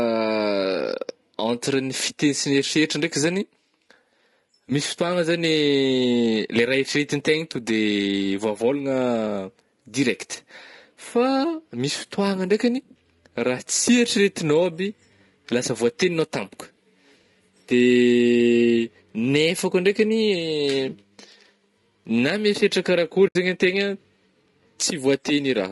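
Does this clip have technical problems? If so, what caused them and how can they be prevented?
Yes. Throughout the speech there is plainly audible codec damage: the voice sounds rough and grainy, with a noisy fill between the harmonics and a thin, somewhat synthetic top band. This is likely low-delay AAC compression such as AAC-ELD, whose short frames give coarse frequency resolution, so at a bitrate around 32 kbps there are too few bits to hold the harmonic structure cleanly. Prevention: raise the bitrate to 48 kbps or more, or use a longer-frame codec where latency allows.

From 23.27 to 23.36 s the audio fades out and back in, leaving a soft-edged gap of about 80 ms. This is AAC frame loss with muting: the decoder zeroed the spectrum of the missing data, and the overlapping windows smoothed the edges into gentle fades. The length points to roughly four lost frames of 20 ms each. Prevention: add forward error correction or redundancy and a larger jitter buffer on the transport path.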